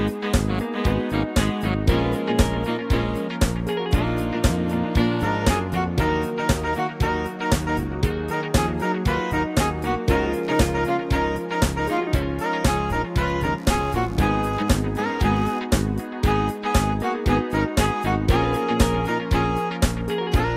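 A faint buzzing chirp rides under the sound from 10.43 to 15.59 s, pulsing around 70 times a second and sitting roughly 35 dB below it. This is computer activity noise: processor or graphics load shifting the shared audio ground.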